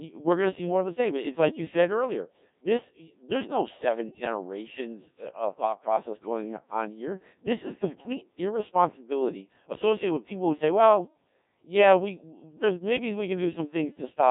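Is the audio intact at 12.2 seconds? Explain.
No, at 12.2 seconds you're hearing the Codec 2 vocoder, which runs through the whole clip. It rebuilds the speech from sine waves using just pitch, voicing and envelope, so it's robotic and buzzy, nothing above 3.8 kHz, heavy damage, consistent with a roughly 1.3 kbit/s mode.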